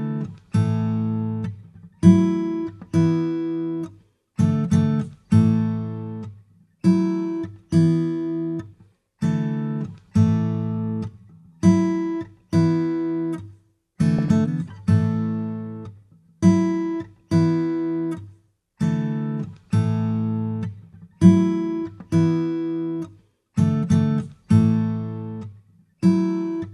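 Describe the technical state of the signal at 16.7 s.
At 16.7 s the signal is intact, with no dropout, distortion, glitch or other audible fault.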